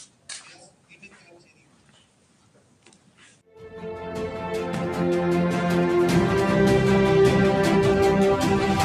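A speech-style noise suppressor left on over non-speech material acts across the whole clip. It treats sustained tones, ambience and decays as noise, so the level swings by roughly 10 dB. Held sound pumps and thins while sharp onsets pass, which sets it apart from ordinary compression.

The sound cut by the noise suppressor is clearest from 0.06 to 0.29 s and again from 0.55 to 3.56 s. There the sustained material sinks by up to about 12 dB and tails are clipped short. Unlike a dropout, the sound never vanishes. It dips and recovers as the suppressor's gain moves.

A loud pop lands at 4.74 to 4.77 s, a single sharp spike peaking about 10 dB above the surrounding sound, which carries on underneath without a gap. That continuity distinguishes it from a buffer glitch. It likely comes from an electrical step such as a plug, switch or static discharge.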